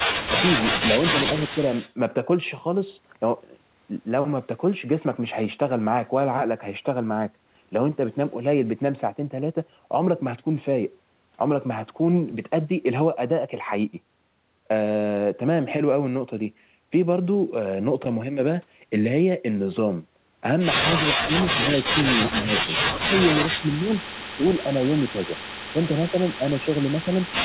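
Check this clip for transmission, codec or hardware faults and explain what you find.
Two faults are audible: an echo leak near the start and speech suppressed in double talk near the end. The audio stops at 4 kHz throughout, which fits a narrowband G.711 mu-law call path.

Echo leak, 1.37 to 1.94 s. A faint copy of the speech trails the original by 225 ms. It sits roughly 15 dB below the direct sound. The likely cause is a far-end loudspeaker whose echo canceller let some pickup pass back.

Speech suppressed in double talk, at 21.0 to 21.98, 22.33 to 22.72, 23.06 to 23.19, 23.54 to 23.87, 24.36 to 25.35 and 25.72 to 27.2 s. The speech dips sharply, by up to about 30 dB early on and about 10 dB later. This is likely an echo canceller turning everything down while both sides talked.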